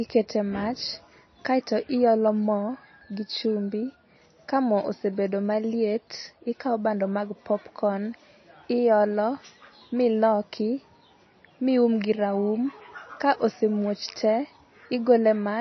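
Speech runs its full length with plainly audible MP3 compression damage, likely from a low-bitrate encode, which fits roughly 26 kbps. The treble is cut off flat at 6 kHz, and weak spectral detail flickers between frames, giving the sound a watery, swirling texture.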